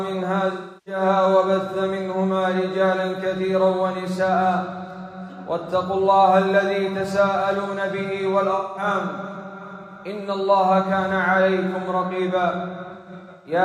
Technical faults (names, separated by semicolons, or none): AAC frame loss with concealment